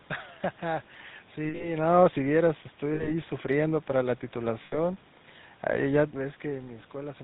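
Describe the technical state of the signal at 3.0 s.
At 3.0 s the sound turns into a rough, metallic ring, held from 2.94 to 3.14 s, where it should keep changing. These are lost GSM frames. The decoder received about 60 ms of unusable data, which fits three 20 ms frames. It filled the gap by reusing the settings of the last good frame, so one sound smears on as a stuck, ringing tone until proper decoding resumes.

Underneath, the audio has the buzzy, gravelly roughness of the GSM full-rate codec, and nothing above 4 kHz comes through. The damage is plainly audible and fits the 13 kbps full-rate coder. It models the vocal tract and drives it with a regularly spaced pulse excitation that keeps only every third sample. That coarse excitation produces the grainy buzz, and the 4 kHz limit cuts off everything higher.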